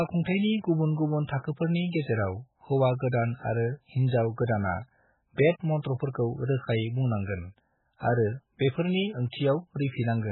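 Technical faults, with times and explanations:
Throughout, MP3 compression: the speech stops dead at 4 kHz and sounds watery and swirling, which a clean low-pass would not do; likely a heavy encode near 8 kbps.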